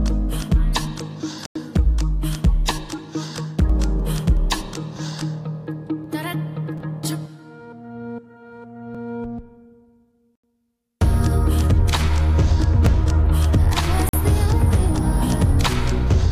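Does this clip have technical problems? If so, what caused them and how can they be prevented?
Yes, there are two kinds of fault. First, three dropouts where the sound cuts to silence and then carries on from where it stopped: at 1.46 s for 94 ms, at 10.35 s for 80 ms, and at 14.09 s for 45 ms. That's most likely a Bluetooth stall. Interference delayed packets, the headphones' buffer emptied, and playback sat silent until the resent data arrived. To prevent it, keep the phone close with nothing blocking the link and clear of busy 2.4 GHz Wi-Fi.

Second, there's a repeated buffer glitch at 6.78 s, 8.95 s and 12.86 s. Each time, a tiny slice of about 5.8 ms gets replayed with hard joins, twice extra at 6.78 s and once extra at the other two. That fits a 256-sample buffer. The pieces are so short that you hear a click or a brief buzz rather than a proper stutter, and nothing seems to go missing afterwards. 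The device simply reused its last buffer when fresh audio came in late. To prevent it, increase the buffer size and reduce CPU load so that audio arrives on time.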